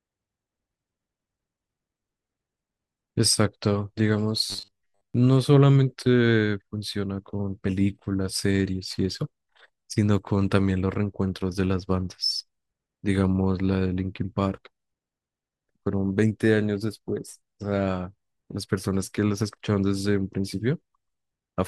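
Robotic sound from repeated short buffers, 4.50 to 5.14 s: speech becomes a metallic 100 Hz buzz, likely from a 10 ms buffer mostly repeating.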